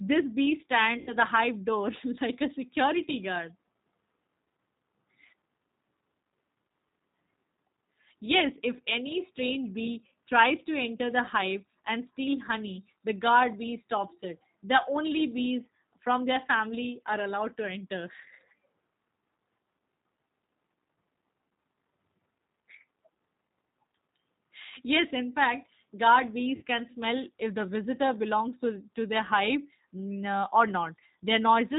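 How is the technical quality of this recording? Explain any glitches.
The recording is speech carried over a low-bitrate phone codec, with two short concealed packet-loss glitches.

G.729 codec: Throughout, the sound is band-limited below 4 kHz and plainly rough and synthetic, which fits 8 kbit/s G.729A rebuilding each frame from a filter, a pitch predictor and a few pulses. That pulse-coded graininess is what separates it from a simple telephone band-limit.

VoIP packet loss concealed by the speech codec: From 0.98 to 1.15 s, just before "the hive door", and at 26.56 to 26.63 s, between "yes in fact guard" and "can smell if the", the decoder extrapolates from its last pitch and filter into a fading sound. This covers about 90 ms and 60 ms of loss, consistent with three and two lost packets. It is a smeared, fading sound rather than the silence of a plain dropout.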